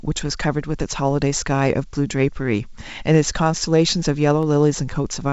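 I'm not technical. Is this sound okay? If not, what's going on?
No, there are two sharp clicks in the speech, at 1.83 s and 4.43 s. They're likely dropped samples: a handful of samples vanished, so the sound jumps abruptly.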